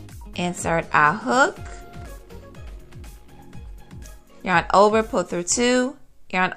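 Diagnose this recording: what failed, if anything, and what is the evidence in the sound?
The failure is in the analogue wiring: loose connector crackle from about 1.97 to 2.20 s. For roughly 0.23 s the audio breaks into an irregular burst of scratching and crackle. A worn or dirty contact is intermittently opening and closing, chopping the signal into fragments.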